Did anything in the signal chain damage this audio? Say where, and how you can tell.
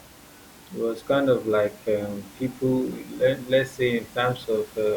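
Yes, one spot. At 2.82 s there's a single sharp click, a thin vertical line through the spectrum, where a handful of samples, likely lost in the driver or buffer stage, went missing and the waveform jumped ahead. It's far too short to cost any speech. The room noise sits about 25 dB below the voice.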